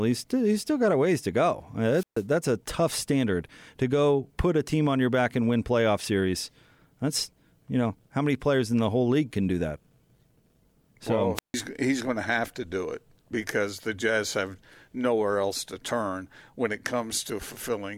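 Wireless microphone squelch dropouts occur at 1.91 to 2.24 s and again at 11.35 to 11.54 s in this speech. Each time, the analogue FM radio link weakens, hiss swells briefly, and the receiver's squelch shuts the output, leaving a hole of near silence of about 135 ms in the first event and 152 ms in the second. The voice then returns once the signal recovers enough to reopen the squelch.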